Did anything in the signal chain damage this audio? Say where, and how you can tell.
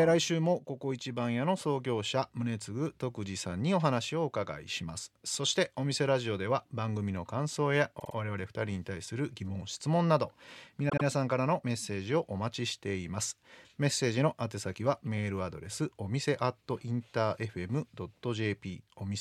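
Yes. Repeated frames, at the codec or storage stage, damage the speech twice. From 7.98 to 8.14 s a block of about 52 ms plays three extra times, and from 10.88 to 11.04 s a block of about 78 ms plays twice more, each adding roughly 157 ms. Both sound like a mechanical stutter. On a spectrogram the same pattern is copied side by side, which fits whole compressed frames being written or sent more than once.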